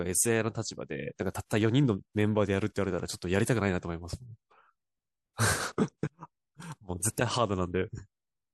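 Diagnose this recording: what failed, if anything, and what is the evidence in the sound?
Nothing failed, and the sound gives no evidence of a fault at any stage of the chain.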